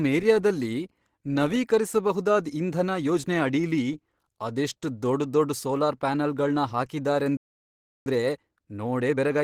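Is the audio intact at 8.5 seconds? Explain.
No. From 8.06 s to 9.43 s the player is running a time-compressed catch-up at about 1.15x. It clears a backlog after a stall by cutting short segments and cross-fading the joins, so the speech sounds hurried at unchanged pitch.

At 8.5 s the speech also carries plainly audible coding damage, likely from Opus compression. It is muffled and hoarse with a grainy, rough texture, which fits the codec's hybrid speech mode at a low rate near 16 kbps, even though the bandwidth stays fullband.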